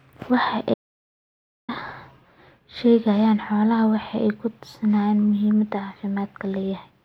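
Audio dropout to silence from 0.74 to 1.69 s in this speech clip: the sound cuts to silence for about 0.94 s, likely a lost input link.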